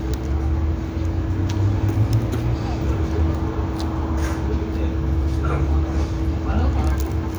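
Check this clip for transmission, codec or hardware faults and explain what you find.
Nothing in the everyday sound here points to a transmission, codec or hardware fault.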